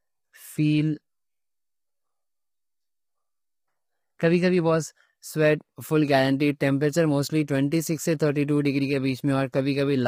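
Low-delay AAC compression, likely AAC-ELD at a starved rate that fits roughly 24 kbps, runs through the whole speech clip. At this low bitrate its coarse quantization leaves the voice sounding heavily rough and grainy, with noise filling between harmonics.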